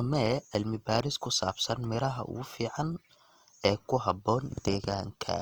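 A speech clip with plainly audible codec damage from start to finish, most likely Opus compression in its music (CELT) mode. The sound turns rough and grainy rather than swirly: where bits are short, the encoder fills bands with noise or folded copies of lower bands, so there are few spectral holes and little of the warbling typical of MP3. The band stays full, reaching 20.2 kHz, at a rate of around 24 kbps.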